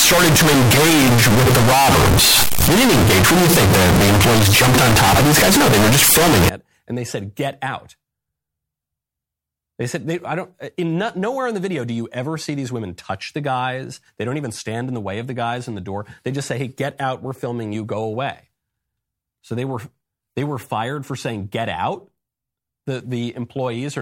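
From 0.0 to 6.49 s the speech sounds like float read as integer, likely 32-bit float samples read as 32-bit integers, giving a near-square, very loud, harsh waveform where background noise matches the speech. Unlike ordinary clipping, quiet passages become just as loud, while pitch remains followable.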